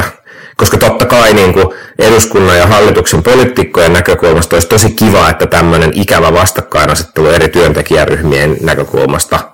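Speech, with hard clipping for the whole clip: the signal is driven about 22 dB beyond what the converter or processing stage can pass, so the waveform peaks are sliced flat and nearly a third of the samples sit pinned at the limit. That is heard as a harsh, buzzy fuzz on every loud syllable, not a crackle on occasional peaks. The abrupt flat tops spray high harmonics, which sets it apart from the rounder, warmer thickening of soft saturation.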